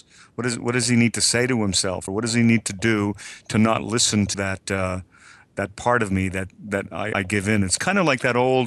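At 2.05–2.08 s, 4.33–4.35 s and 7.12–7.15 s the speech jumps ahead through a brief glitch, likely a broken MP3 bit reservoir: after missing frames, the decoder reads another frame's bytes. Each glitch shows as a roughly 26 ms disrupted strip on the spectrogram and a discontinuity in the waveform.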